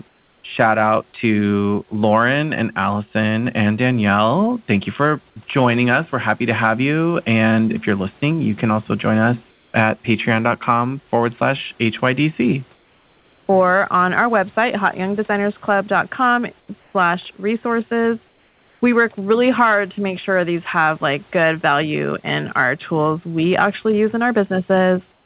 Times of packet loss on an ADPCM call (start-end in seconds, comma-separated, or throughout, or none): none